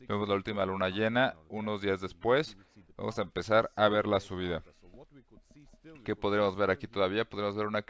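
No technical faults can be heard anywhere in the clip.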